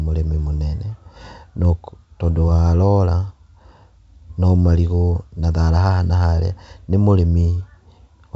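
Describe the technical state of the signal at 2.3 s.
At 2.3 s the signal is intact, with the speech carried cleanly through G.722 wideband telephone coding at 64 kbit/s.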